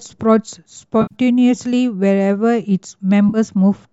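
A smeared, hollow, noisy patch breaks the speech from 1.02 to 1.15 s, and a shorter one follows at 3.29 to 3.38 s. This is AAC frame loss with concealment: the decoder, likely low-delay AAC with roughly 10 ms frames, rebuilt about 90 ms and 50 ms of missing audio from the last good spectrum.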